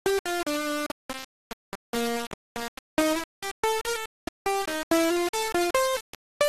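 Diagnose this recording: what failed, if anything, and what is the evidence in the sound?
The failure is at sample-format conversion. Throughout the music, a coarse grain rides on every sound and changes with it. Quiet passages sputter between steps, and the distortion sits almost as loud as the music. This is likely low bit depth without dither, consistent with rounding to about 4 bits.

The codec stage also failed. The whole clip sounds dull, with a gurgling, granular texture. Upper bands flicker in and out, and what remains is coarsely quantised. That points to MP2 compression at a low rate, around 80 kbps, with sub-bands starved of bits.

Reception or transmission broke down from 1.44 to 1.56 s. A burst of short noise blips lands over the music for a few frames. This is DAB burbling. A small rate of bit errors slipped past error correction, and wrong samples put short blips of noise in single sub-bands.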